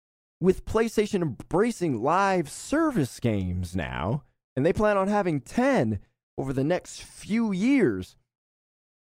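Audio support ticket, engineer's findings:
No audible faults found.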